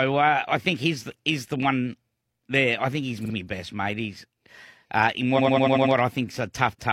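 Speech with two stutters from repeated frames: at 3.21–3.30 s a 46 ms block, about one compressed frame, plays twice more, adding 93 ms; at 5.34–5.90 s a 93 ms block, about two frames, repeats six more times, lengthening the audio by 0.56 s.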